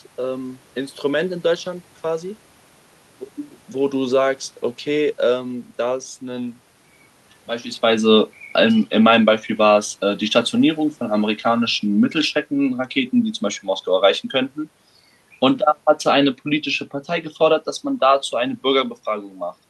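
Speech recording with automatic gain falling: from 7.83 s to 14.22 s the gain control, judging the input too loud or its background noise too strong, steadily pulls its gain down by about 5 dB, so the voice and the room noise beneath it sink together, unlike the talker's own shift in distance shortly before.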